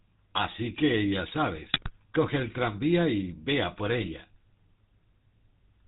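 From start to finish the speech carries the buzzy, gravelly roughness of the GSM full-rate codec, which fits a 13 kbps stream. The codec models the vocal tract with a filter and drives it with a pulse train that keeps only every third excitation sample. That coarse excitation gives voiced sounds a grainy, rasping edge. Nothing reaches above 4 kHz, so sibilants are dull and the top end sounds boxed in.

At 1.72 to 1.91 s, and again at 3.98 to 4.10 s, GSM bit errors break through. Corrupted bits reached the decoder, so filter, pitch or gain parameters were decoded wrong for a few frames in a row. The voice turns into squawks, pops and a gargling smear, and the spectrum and level jump from frame to frame. The first burst is longer and denser, which points to a higher error rate on the link there.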